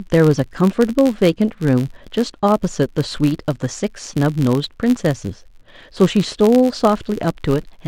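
Throughout the speech a filter restarted on every block leaves a buzz at about 86.1 Hz that rises and falls with the speech's level. That rate fits a 512-sample buffer. Mains hum holds steady instead.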